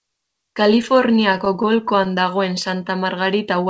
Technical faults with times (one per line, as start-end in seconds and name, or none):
0.82-2.07 repeated stalls (stutter)